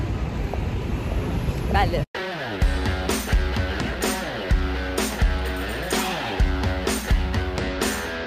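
Sample clock jitter runs from 0.56 s to 7.59 s. Converter timing wanders a few microseconds. Loud, bright passages gain hiss about 30 dB down.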